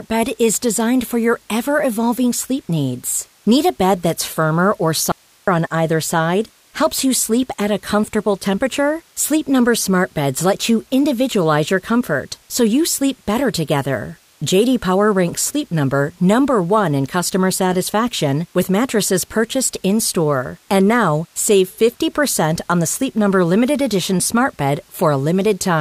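At 5.12 s the speech cuts out abruptly for about 360 ms, until 5.48 s. It's an audio dropout to a faint residue: only hiss remains, roughly 35 dB below the signal. The likely cause is a brief loss of the wanted signal while the downstream path stayed live.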